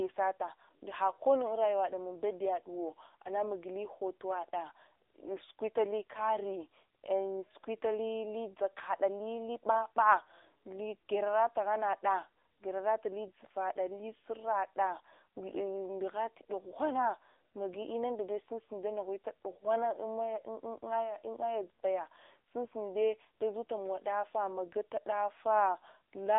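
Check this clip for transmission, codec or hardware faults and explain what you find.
One fault runs through the whole recording: mobile narrowband codec damage.

AMR narrowband mobile codec, present throughout. The speech has been squeezed into a telephone channel of roughly 300 Hz to 3.7 kHz, and nothing at all survives above 3.8 kHz, so sibilants and breath lose their edge. The coder rebuilds each 20 ms frame from a vocal-tract model excited by a handful of pulses. With the plainly audible buzzy, synthetic texture this produces, the sound points to one of the lower AMR-NB modes, around 8 kbps.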